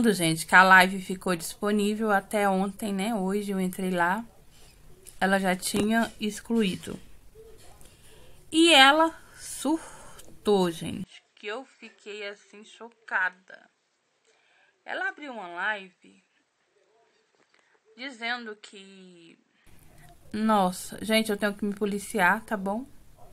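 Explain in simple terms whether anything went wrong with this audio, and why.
From 11.04 to 19.67 s the sound turns duller, quieter and faintly noisier, then recovers. That is likely an input switched to a poorer device, not merely a volume dip.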